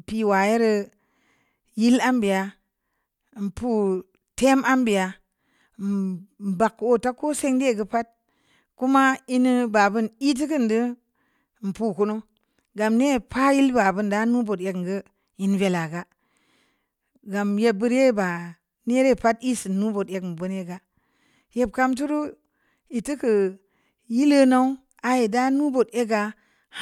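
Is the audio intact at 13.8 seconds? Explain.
Yes, at 13.8 seconds the speech plays through intact, with no dropout, click, distortion or other fault at that moment.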